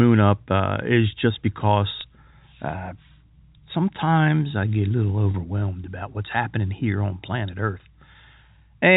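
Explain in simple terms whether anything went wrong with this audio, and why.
Packet loss with pitch repetition briefly interrupts this telephone-quality G.711 speech at 2.01 s and 5.31 s, each gap lasting 30 ms, which fits one lost packet. The receiver repeats the last pitch cycle to fill each gap, so the sound holds with a slight buzz.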